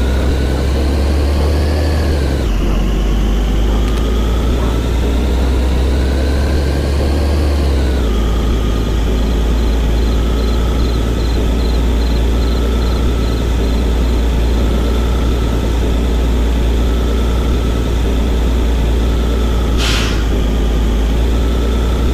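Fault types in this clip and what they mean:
Loose connector crackle: a worn contact making and breaking, chopping the signal into a scratchy burst near 3.9 s, seen as jagged spikes and broadband vertical streaks.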